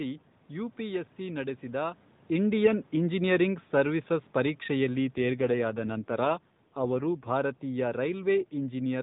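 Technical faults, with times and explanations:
2.3–8.98 s, automatic gain falling: right after "ಯುಪಿಎಸ್ಸಿ ನಡೆಸಿದ" the level eases down by about 8 dB, speech and background sinking together as the gain control backs off.
5.16–7.32 s, AMR rate drop: the speech turns rougher and more synthetic with no gap and no loss of band, which fits the codec dropping from 12.2 to 5.9 kbps.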